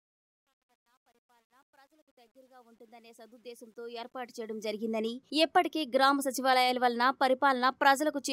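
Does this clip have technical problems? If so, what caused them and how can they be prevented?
Yes. Truncation distortion on the fade-in runs from 0.0 to 5.0 s. It is grittiest until 3.62 s, which fits a 10-bit stage without dither. Use higher-resolution fades and add dither.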